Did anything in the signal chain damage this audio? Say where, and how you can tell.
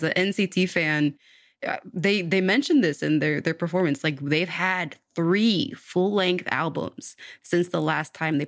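Yes. From 6.76 s to the end of the clip at 8.48 s, the speech carries a buzz at 50 Hz that is present only while there is signal. This points to a resampler restarted on every block, in the sample-rate conversion stage, which fits a 24 kHz to 16 kHz conversion done in 20 ms blocks. Each block was converted with no memory of its neighbours, so every edge picks up a small error. On a spectrogram this shows as thin vertical lines every 20 ms. On the waveform it shows as small discontinuities at each block boundary.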